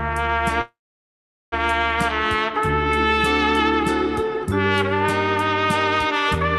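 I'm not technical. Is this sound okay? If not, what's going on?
No. From 0.61 to 1.54 s there is a call audio freeze: the sound stalls into a brief fading buzz, then near silence, likely because the call's data was held up in transit. Unlike a dropout, nothing is lost; it resumes exactly where it stopped.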